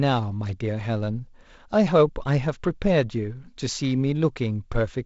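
Nothing's amiss here: it's just speech carried over G.722 wideband telephone coding, doing what that codec normally does, and there are no faults to point to.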